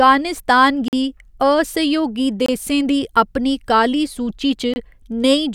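At 0.88 s the speech drops into a block of digital silence lasting about 46 ms, just before "गी असहयोगी देसें दी". Two shorter gaps of about 23 ms follow, at 2.46 s after "गी असहयोगी" and at 4.74 s after "दी अपनी काली सूची". The signal cuts out and returns with no fade. These are short holes. The lengths fit output buffers of 2048 and 1024 samples that were not filled in time.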